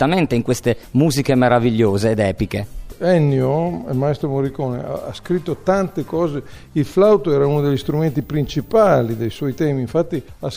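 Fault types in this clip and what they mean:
switching supply whistle: a thin high tone near 15 kHz, about 35 dB below the audio, from 7.52 to 9.66 s, caused by a power supply's switching frequency leaking in. Its pitch wanders between 14.84 and 14.92 kHz, unlike a fixed-pitch line-scan whine.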